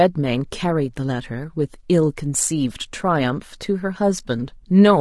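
From start to end, the speech sounds rough and grainy, with hiss filling the gaps between harmonics and a thin, artificial top band. This is likely low-delay AAC compression: AAC-ELD's short frames resolve pitch harmonics poorly, which fits a tight bitrate around 32 kbps.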